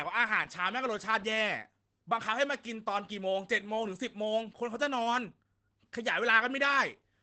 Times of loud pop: none

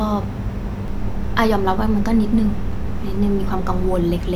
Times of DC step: 0.88-3.96

